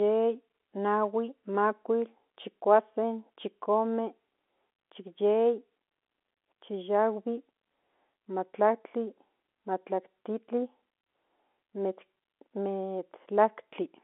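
No technical faults can be heard in the speech; it carries the narrow telephone band of G.711 coding, roughly 250 Hz to 3.5 kHz, with at most a faint level-following graininess from the codec.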